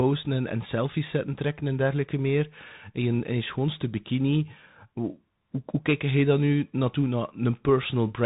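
Speech carried through a Bluetooth CVSD headset codec for its whole length: nothing above 3.8 kHz survives, s sounds turn scratchy, and a granular hiss sits underneath. On a spectrogram the energy stops flat at 3.8 kHz, with a noisy floor below it.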